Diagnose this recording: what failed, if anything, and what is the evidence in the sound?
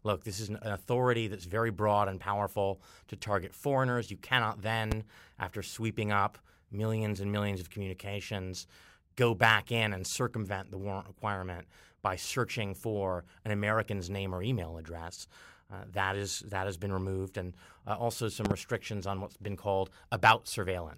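Loud pops at 4.92–4.94 s and 18.45–18.53 s (double), about 15–20 dB above the speech, which continues underneath. They show as vertical spectrogram lines and waveform spikes, likely analogue-wiring voltage transients.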